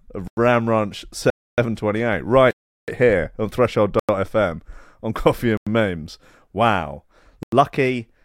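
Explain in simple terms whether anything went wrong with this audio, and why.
The sound drops out completely six times, a block of digital silence each time: 0.28 to 0.37 s, 1.30 to 1.58 s, 2.51 to 2.88 s (just before "here on"), 3.99 to 4.09 s (just after "here on"), 5.57 to 5.67 s, and 7.43 to 7.52 s. The program most likely failed to deliver audio in time, so those stretches became silence. Unlike a fade or a muffled glitch, each cut is instant. The gap lengths fit whole audio buffers.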